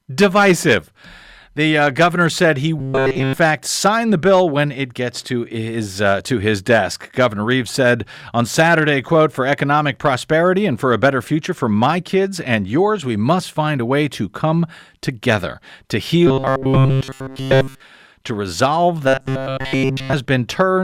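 Three stretches of robotic sound from repeated short buffers: 2.79 to 3.33 s, right after "uh governor said he" and before "sign the bill when"; 16.27 to 17.80 s, after "to come together to" and before "to resolve"; and 19.08 to 20.13 s, just after "to resolve". Each time the speech collapses into a stiff metallic buzz at 133 Hz. That's likely a starved playback path looping a single chunk of about 7.5 ms, with essentially all of the sound in those stretches being repeats.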